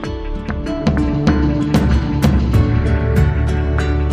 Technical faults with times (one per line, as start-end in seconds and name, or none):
none